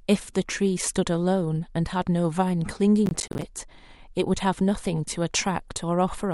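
Processor overload crackle from 3.06 to 3.42 s: roughly fifteen buffers of about 10 ms each miss their deadline, leaving hard-edged silent gaps heard as gritty crackle.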